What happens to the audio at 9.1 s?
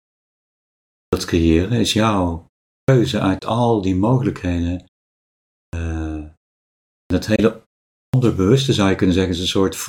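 Nothing goes wrong at 9.1 s; the audio is intact there.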